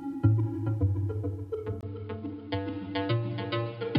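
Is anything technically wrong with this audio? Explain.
Yes. At 1.81 s the sound turns duller and boxier through to the end, after a silence of about 20 ms. Nothing above 5.1 kHz remains. A new, faint noise floor appears. The level stays the same. This points to an input switched to a poorer device, likely, whose narrower band cuts the highs.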